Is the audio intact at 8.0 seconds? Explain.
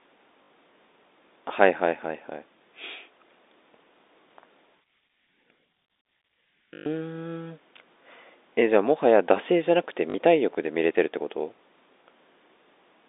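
Yes, the speech at 8.0 seconds is intact, with nothing breaking into the G.711 telephone coding at that point.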